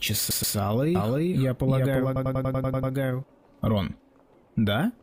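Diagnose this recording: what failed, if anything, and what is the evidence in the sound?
Repeated frames, a fault at the codec or storage stage. From 0.30 to 0.56 s a 128 ms block plays three times in a row, adding 256 ms. From 2.16 to 2.93 s a shorter 96 ms block loops nine times, adding 768 ms. The compressed frames covering each block were written or delivered more than once, so the decoder replayed the same slice of sound. The result is a mechanical stutter that lengthens the recording.

A doubled audio track runs from 0.95 to 3.24 s. A full-band copy of the sound trails the original by about 300 ms at roughly equal level. It has no decay or room colouring, so it reads as a second playback rather than an echo. It switches on and off abruptly at those two points. The likely cause is the same signal being captured a second time through a slower path and mixed back into the recording.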